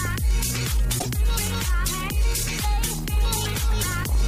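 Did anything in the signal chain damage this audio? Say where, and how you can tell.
Yes. A broken MP3 bit reservoir, at the codec stage, is the likely cause of the damage from 0.98 to 1.06 s, where the sound jumps ahead and comes out garbled for about 80 ms. That spans roughly three 26.1 ms frames decoding against another frame's borrowed bytes after a cut.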